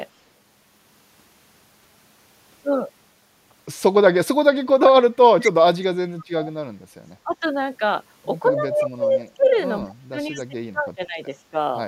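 A speech recording in which the talker's level collapses in three places, consistent with speech suppressed in double talk: from 4.61 to 6.51 s (dropping about 40 dB, roughly one and a half seconds affected), briefly at 7.24 to 7.41 s (about 10 dB), and from 8.55 to 11.55 s (about 25 dB, around two seconds). The likely cause is an echo canceller attenuating the near talker while the far end speaks. Echo leak also appears as a copy of the speech delayed by 161 ms, at 5.43 to 5.51 s about 10 dB below the speech and at 9.09 to 9.59 s much fainter, about 30 dB down, likely from loudspeaker pickup that the canceller failed to remove.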